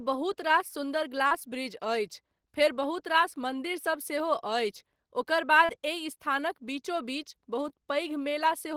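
At 1.27–1.32 s after "रास सुन्दर", 5.65–5.70 s before "एहि स्थानक बीचो बीच", and 7.69–7.71 s after it, short concealed packet loss: 40 ms, 40 ms, then 10 ms, of audio arrived too late and was patched by extending preceding sound. Each event is a brief smear.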